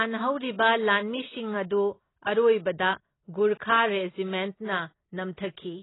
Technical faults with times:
0.00-5.82 AAC compression

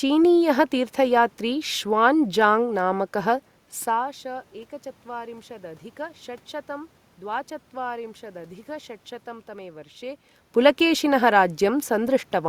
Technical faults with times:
none

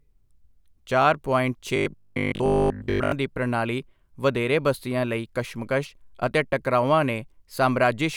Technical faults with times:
1.76-3.12 robotic sound from repeated short buffers

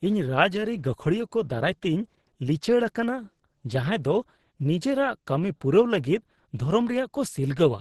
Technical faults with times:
0.00-7.80 Opus compression

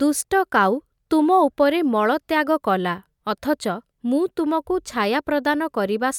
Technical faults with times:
none

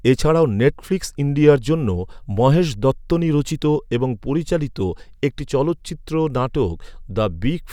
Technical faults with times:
none

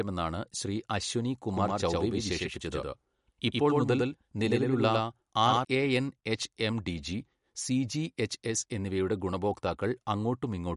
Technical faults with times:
0.00-10.76 MP3 compression
1.53-5.65 doubled audio track

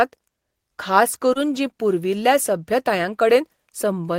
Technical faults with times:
1.33-1.37 short concealed packet loss

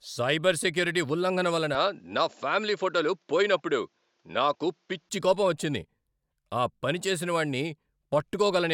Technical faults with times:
1.75-5.09 input switched to a poorer device

